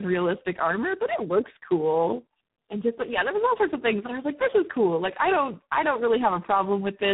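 Throughout, tandem speech coding: three speech codecs re-encode each other's output, compounding roughness and warble beyond any single codec, with nothing above 3.8 kHz.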